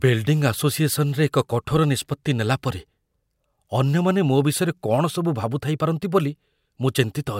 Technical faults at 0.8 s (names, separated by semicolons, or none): none